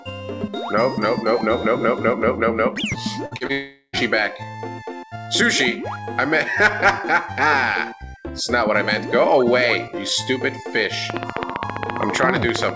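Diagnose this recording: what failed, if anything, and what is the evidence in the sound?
Burst of packet loss at 3.26 to 3.34 s, at the network stage. About 53 ms of the last sound is stretched into a fading buzz or hiss by the receiver's concealment, and playback then resumes with roughly 60 ms of audio skipped. The loss is audible against a band that stops at 8 kHz.

Short concealed packet loss follows at 3.37 to 3.44 s and 3.47 to 3.52 s. Each hole, about 30 ms of missing audio, is patched with a brief continuation of the preceding sound and blended back, heard as quick smears or wobbles in the stream.

Long network dropout from 3.52 to 3.96 s. The sound is drawn out as a decaying buzz or hiss for about 0.41 s, then falls to near-silence for about 60 ms before audio returns. Some 0.42 s of content is gone, likely because the connection stopped delivering packets for that stretch.

Train of clicks from 11.1 s to the end of the clip. 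Sharp, similar pulses repeat at a steady 15 per second and stand around 20 dB above the sound, ticking through pauses as well. This is likely interference or a faltering interface in the analogue or converter stage.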